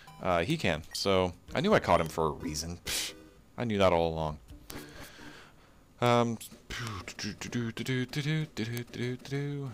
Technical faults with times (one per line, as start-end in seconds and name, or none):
0.50 bit error spike
2.06 bit error spike
2.95 bit error spike
4.70 bit error spike
6.06 bit error spike
6.87 bit error spike
7.87 bit error spike
8.77 bit error spike